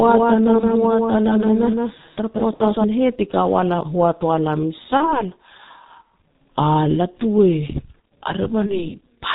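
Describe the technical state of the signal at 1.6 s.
At 1.6 s a doubled audio track is present. It is already running when the clip begins and ends abruptly at 2.84 s. A full-band copy of the speech trails roughly 150 ms behind, around 5 dB quieter. It has no decay or room colour. The likely cause is a second, slower capture path mixed back in.

The G.723.1 codec also shapes this moment, as it does the whole clip. At 6.3 kbit/s, with heavy damage, it removes everything above 4 kHz. Its slowly updated voice model leaves the speech muffled and hoarse, with smeared consonants.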